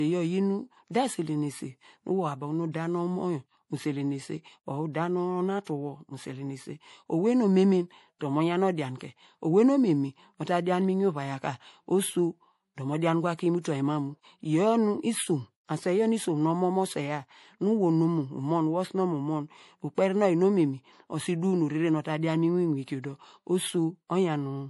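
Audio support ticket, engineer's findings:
MP3 compression, whole clip: watery, swirly speech, chirpy sibilants, nothing above 11.5 kHz. Likely a low-bitrate encode, around 48 kbps. Flickering bands, not a clean low-pass filter.

Pre-echo at 5.64 s, 8.98 s (after "omemen dor mo yan", before "owei nu omemen"), 13.61 s, 19.95 s and 22.84 s: 23 to 37 ms of hiss ahead of sharp onsets. The codec spreads block noise before the attack, unlike a reverb tail, which follows it.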